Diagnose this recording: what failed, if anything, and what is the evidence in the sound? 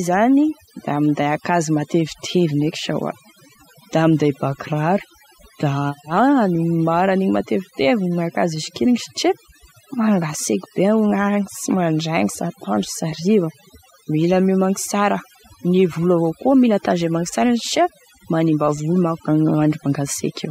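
Overdone noise removal, at the processing stage, throughout. The background drops and breaks up into twinkling specks. Quiet speech bands vanish too.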